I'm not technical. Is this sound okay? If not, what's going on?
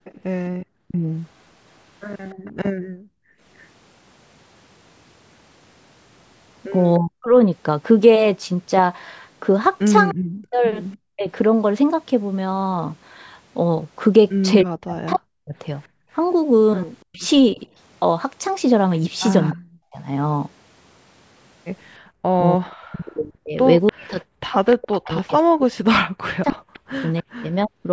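No. There are three separate problems.

Echo leak: a faint copy of the speech comes back about 0.3 seconds late. It is most likely a loudspeaker on one end of a call being picked up by that end's microphone and sent back. You hear it from 0.04 to 2.52 s, in brief scraps at 6.94, 10.09 and 19.5 s, and again from 23.86 to 27.22 s. That last stretch is the loudest.

Speech suppressed in double talk: the main speech dips sharply or drops out in pieces, likely because both ends were talking at once. The call's echo canceller could not tell the talker from the echo, so it turned both down. This happens briefly from 0.82 to 0.95 s. It happens again, on and off for about a second in total, between 6.99 and 11.26 s. From 14.63 to 27.88 s it adds up to about five seconds.

Background gated by the echo canceller: the room sound behind the speech suddenly sinks, then comes back. Here the canceller clamped down hard on the microphone while the loudspeaker was playing. 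The longest drop runs from 2.42 to 3.4 s and lasts most of a second. Shorter ones come from 15.89 to 16.1 s and from 21.99 to 22.12 s.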